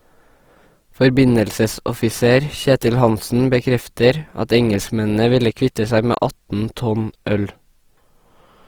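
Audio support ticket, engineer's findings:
Throughout, 0 to 8.7 s: speech grainy and rough, tonal parts smeared into a noisy texture, few dropouts or swirling. Bandwidth stays full, with content to about 20.2 kHz. Component: likely Opus compression in music (CELT) mode, at a rate that fits roughly 24 kbps. Bit-starved bands are refilled with folded copies or noise instead of being left empty.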